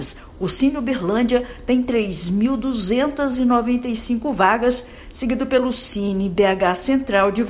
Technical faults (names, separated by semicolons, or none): none